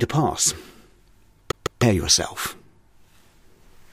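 A CD stuck on one turn runs from 1.52 to 1.83 s. The laser keeps jumping back a track at a scratch, so a 155 ms slice of audio plays twice in a row, with a brief mute at each jump, giving a quick, even stutter.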